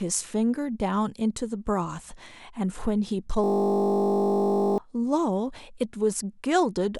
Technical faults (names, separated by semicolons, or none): system hang loop